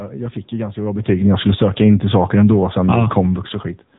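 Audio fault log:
Throughout: AMR narrowband mobile codec, plainly audible, nothing above 3.8 kHz, buzzy synthetic texture consistent with about 8 kbps, unlike simple band-limiting, which leaves no buzz.
0.74–3.17 s: automatic gain falling, starting after "jag fick ju", level sinks about 6 dB gradually with the room noise, unlike a talker moving, where background stays steady.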